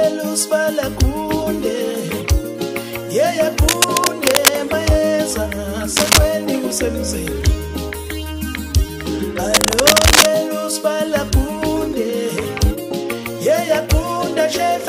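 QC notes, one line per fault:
3.68–4.49 s, 5.96–6.19 s and 9.54–10.27 s, cable scratch noise: a worn cable, plug or control was likely being moved, its contact resistance jumping erratically. Dense, irregular crackling bursts ride over the sound, level with it in the first burst and about 5 dB above it in the other two.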